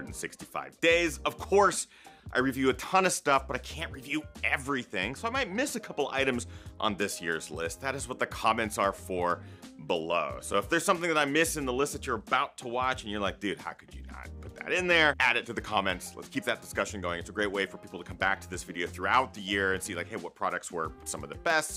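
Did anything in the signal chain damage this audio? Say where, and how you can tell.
No signal-chain damage audible.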